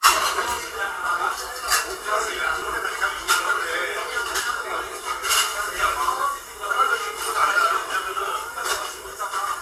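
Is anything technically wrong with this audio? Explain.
Yes. At 2.62 s the software likely failed to read its input buffer before the hardware overwrote it, a dropped buffer (overrun). Around 40 ms of sound is lost and the two sides butt together, so the audio jumps ahead.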